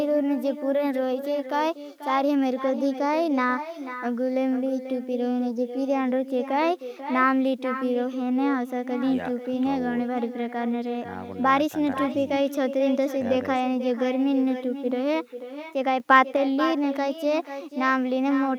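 Throughout, echo with no canceller: the far end's loudspeaker feeds its microphone unchecked, so each phrase returns about half a second later, about 11 dB quieter and thinner. From 16.0 to 16.36 s there is a sudden gain jump, likely from a gain change applied without a ramp, and speech and background noise step up together by about 4 dB.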